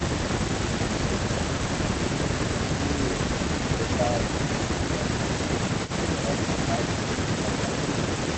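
From 1.71 to 1.91 s the speech dips by about 10 dB for roughly a tenth of a second, and again briefly at 4.96 to 5.00 s. This is speech suppressed in double talk, likely the echo canceller mistaking this talker for loudspeaker echo while the far side spoke and attenuating both. On a waveform the envelope sags abruptly. A spectrogram shows the harmonics fading across the band.

Between 5.85 and 5.91 s a faint delayed copy of the voice appears, about 15 dB below the direct speech and trailing it by 380 ms. This is an echo leak, likely from a loudspeaker end whose canceller let part of its microphone pickup return. On a spectrogram it shows as a weak repeat of earlier harmonic patterns, offset in time. On the waveform it is a low ripple riding under the main signal.

From 5.86 to 6.68 s the suppression returns, with dips of about 10 dB adding up to around a fifth of a second. The level dips in places, leaving notches in the waveform. 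Throughout, the spectrum stops at 8 kHz, consistent with an Opus call path at roughly 32 kbps.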